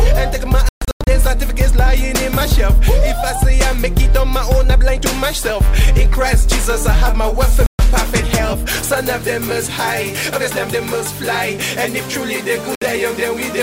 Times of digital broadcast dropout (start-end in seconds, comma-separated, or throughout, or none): 0.69-1.07, 7.66-7.79, 12.75-12.82